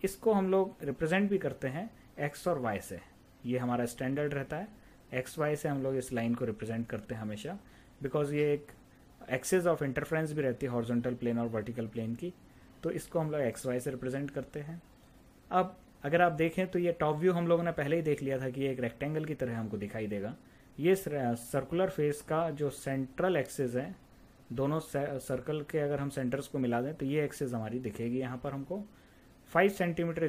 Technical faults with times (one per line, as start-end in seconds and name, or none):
none